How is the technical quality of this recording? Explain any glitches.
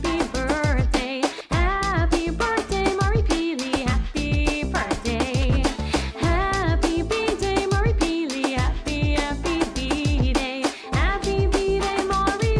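No glitches can be heard anywhere in the recording; the signal stays continuous and stable throughout, with nothing interrupting or disturbing it.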